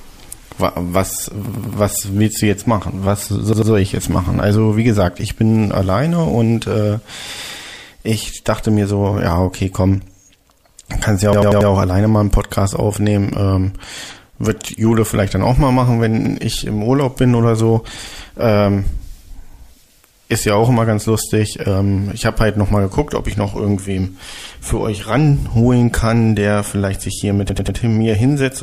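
Repeated buffer faults occur when fresh audio fails to reach the output in time and the device replays its last block, about 93 ms long, which fits a 4096-sample buffer. At 1.49 to 1.77 s the block plays three extra times, at 3.53 to 3.72 s twice, at 11.33 to 11.70 s four times, at 16.25 to 16.35 s once, and at 27.49 to 27.77 s three times. Each is a stutter with hard joins, and the sound then resumes with nothing missing.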